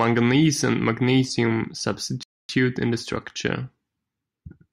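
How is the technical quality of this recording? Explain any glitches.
There's one glitch in this speech clip, a rebuffering stall. From 2.23 s to 2.49 s the audio drops to silence for about 0.26 s and then picks up exactly where it stopped. The player ran dry of downloaded data and waited for more, so nothing's missing, but that gap stretches the timing.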